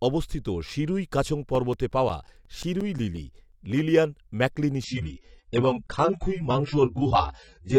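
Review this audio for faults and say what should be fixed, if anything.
From 1.37 to 3.52 s, right after "অবস্থিত শিরুই কাছং" and before "লিলিয়ান ম্যাকলিনি", there's a run of CD scratch ticks, about six a second, the longest around 10 ms. Each turn of the disc hits a blemish that error correction can't rebuild, so the player patches or mutes those samples. Cleaning the disc or using a secure ripper with re-reads would prevent this.

From 4.84 s to the end, just after "লিলিয়ান ম্যাকলিনি", the audio abruptly loses its top end, with nothing above 9.3 kHz, and it gets smeary and artefact-laden. That's an adaptive stream dropping to a lower bitrate, which fits AAC-LC at around 16 kbit/s. Capturing from a steady connection or locking the highest rendition would avoid it.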